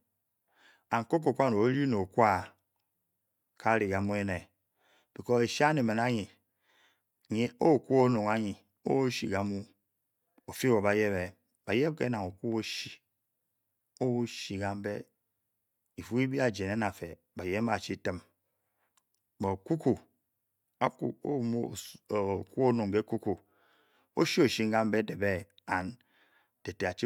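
No technical faults can be heard anywhere in the speech.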